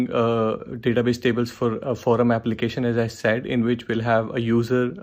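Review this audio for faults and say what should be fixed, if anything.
Nothing stood out on listening, so there is nothing here that needs fixing.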